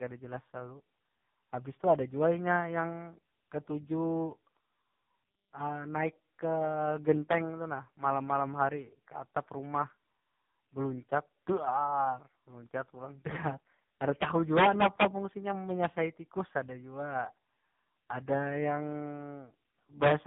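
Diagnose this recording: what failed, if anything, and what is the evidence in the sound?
Tandem speech coding at the codec stage, throughout: GSM full rate, then G.711, then AMR-NB at 6.7 kbit/s re-encode each other's artefacts. The result is warblier and rougher than single-codec band-limiting, with nothing above 3.8 kHz.

Integer overflow in sample-format conversion, at 14.22–15.05 s and 20.04–20.11 s: peaks about 6 dB and about 3 dB over full scale wrap to the opposite sign. This gives violent cracks, not clipping's flattened tops.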